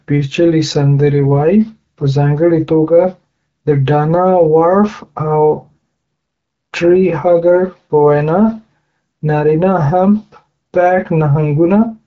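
No technical faults are audible.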